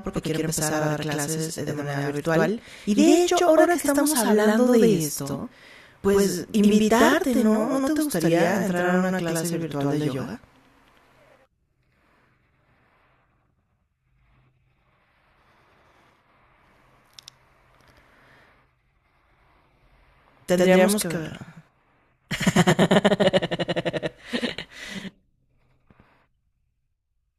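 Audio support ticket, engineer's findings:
Channel delay (doubling) throughout the speech, start to end. Every syllable is followed by a same-level copy about 93 ms later, heard as a slap echo or doubled voice. Probable component is the capture or mix buffer path. One channel is late by a whole buffer, which fits a 4096-sample buffer, and the two channels are summed to mono so both copies play at once. Check channel alignment before the mono fold-down.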